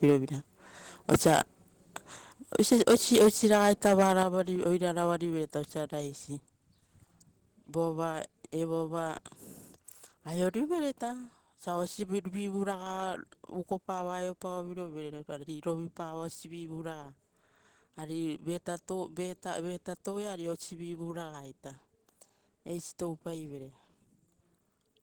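From 2.55 to 4.23 s, microphone overload likely squares off peaks about 8 dB too hot, giving harsh crackle, flat-topped waveforms and broadband spectrogram smears. At 3.22 s and 4.23 s, the level abruptly drops about 2 dB, then about 7 dB. This is likely microphone volume stepped down, seen as sharp waveform steps.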